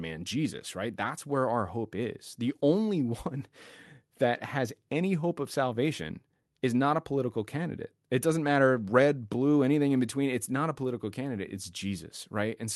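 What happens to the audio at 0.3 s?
Nothing goes wrong at 0.3 s; the audio is intact there, carried through the call path as usual with the high end limited to what appears to be a band of about 12 kHz.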